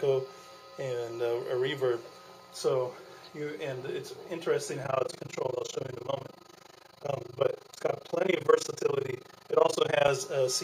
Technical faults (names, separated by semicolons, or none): overlap-add ripple